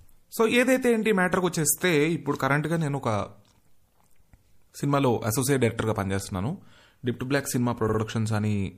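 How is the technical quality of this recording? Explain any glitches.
The recording has audible problems: a coarse, compressed sound throughout and one short stutter near the end.

Throughout, the speech sounds watery and swirly, and s sounds chirp metallically. This is likely MP3 compression at a low bitrate, around 64 kbps. Starved of bits, the encoder drops weak frequency detail, which flickers frame to frame.

From 7.88 to 7.98 s there are repeated frames. A block of about 52 ms plays twice more, which fits two compressed frames being resent. The result is a stutter, and the audio runs about 0.1 s longer.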